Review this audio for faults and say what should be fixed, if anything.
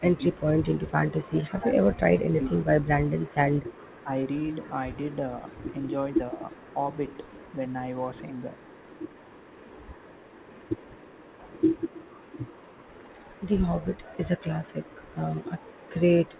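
Speech suppressed in double talk: the echo canceller, likely confused while both sides talked at once, turned down the near talker along with the echo. The speech dips by up to about 20 dB from 0.00 to 0.52 s and from 1.56 to 4.11 s, and by about 5 dB from 6.32 to 6.78 s. Across the middle stretch, roughly one and a half seconds is cut back in pieces. A double-talk detector that holds full near-end gain while the far end is active would prevent this.

Echo leak: the far-end loudspeaker's echo canceller likely did not remove everything its microphone picked up and sent the leftover back. A faint copy of the speech, trailing by 397 ms and about 30 dB below it, is heard from 0.62 to 1.51 s and from 2.81 s to the end. Better echo-path modelling, or a stronger residual echo suppressor on the loudspeaker side, would prevent this.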